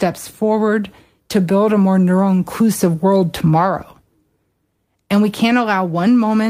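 A short stretch of speech, and nothing technically wrong turns up anywhere in it.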